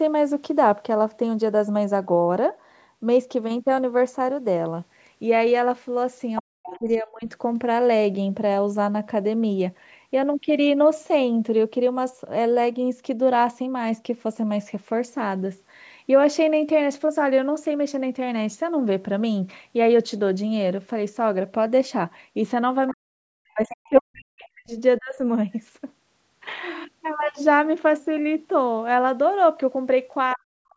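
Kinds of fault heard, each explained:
Other side's voice leaking through: brief, faint second voice, likely loudspeaker echo the canceller missed, roughly 10 to 20 dB below the speech, seen as weak overlapping harmonics.
Speech suppressed in double talk: the talker's level plunges by up to about 40 dB, likely echo cancellation ducking overlapping talk, leaving waveform dips near 6.4, 23, 25 and 30.3 s.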